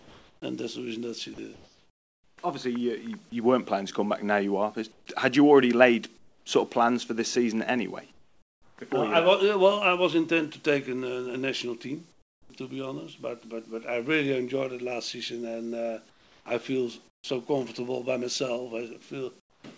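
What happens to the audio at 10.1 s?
Nothing goes wrong at 10.1 s: the audio runs on intact through the call path, with no dropout, glitch or distortion at that moment.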